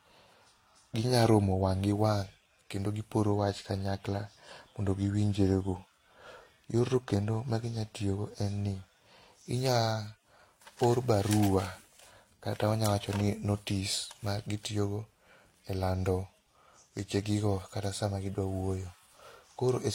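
Speech that shows transcoding between lossy codecs throughout, with nothing above 16.2 kHz. Two sets of artefacts overlap, which tells it apart from a single low-bitrate encode. The mix most likely points to a Vorbis encode near 49 kbit/s re-encoded as HE-AAC near 32 kbit/s.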